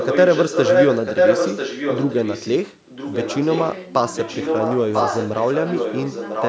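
From 0 to 2.51 s, a delayed copy of the speech returns about 995 ms after the original, and in this stretch it is louder than the direct voice. The echo recurs from 2.67 to 3.73 s and again from 4.15 s to the end, now sitting somewhat below the speech. This is echo leak. The far end is likely on a loudspeaker whose echo canceller failed to suppress what its microphone picked up, so that copy was sent back.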